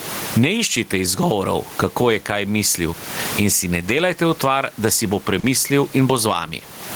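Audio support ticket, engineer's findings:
Gain pumping throughout: a swing of around 25 dB. Sound squashed, level flattened. Likely mic gain set way too high with a fast limiter clamping every peak. Room noise about 31 dB below the speech.

Short concealed packet loss, 5.39–5.46 s: brief smear where roughly 40 ms never reached the decoder. Receiver bridged the gap by extending the preceding sound, then crossfaded back into real audio. Jitter buffer/network path worth checking.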